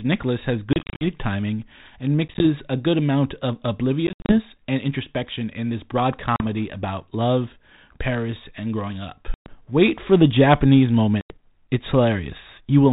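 Speech over a narrowband ADPCM link, consistent with 32 kbit/s G.726, shows packet loss on an ADPCM call at 0.73–1.06, 2.28–2.46, 4.07–4.39, 6.36–6.42, 9.34–9.63 and 11.21–11.36 s. Each appears as hard-edged flat gaps in the waveform and blank vertical strips on a spectrogram, followed by briefly distorted speech while the decoder's predictor and step size resynchronise.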